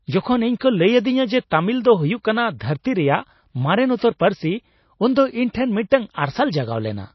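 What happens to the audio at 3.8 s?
At 3.8 s the speech sits inside MP3 compression running through the whole clip, likely at a very low bitrate near 24 kbps: the encoder cuts everything above 5.8 kHz and drops weak frequency lines frame by frame, so the sound is dull, watery and swirly, with smeared attacks.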